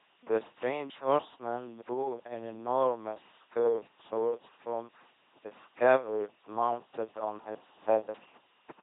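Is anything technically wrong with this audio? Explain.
Yes. Throughout, the speech passes through an LPC-10 vocoder. Each moment drives a ten-pole filter with buzz or noise, giving robotic, buzzy speech, nothing above 3.8 kHz, and heavy damage fitting 2.4 kbit/s.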